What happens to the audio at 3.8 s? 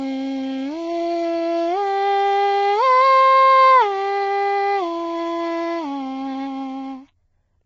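At 3.8 s the music carries heavy low-delay AAC compression, as it does throughout. Short frames resolve the harmonics poorly, so the tone turns rough and grainy, with noise between harmonics. Nothing sounds above 7.7 kHz. This likely points to a very low bitrate, around 16 kbps.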